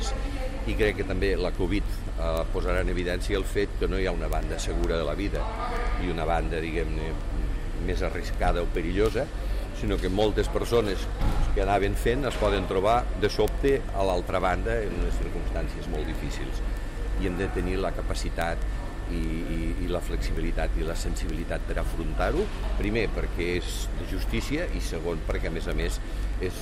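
Throughout the sound, from 0.11 s to 26.54 s, a steady train of sharp ticks repeats about every tenth of a second, roughly ten per second and a few hundred in all. These are word clock ticks. The receiving device is running on its own clock rather than locking to the sender's over the digital link. The two rates differ by something around 200 ppm, so the clocks slip past each other about ten times a second. At each slip, one sample is dropped or repeated, and the waveform jumps.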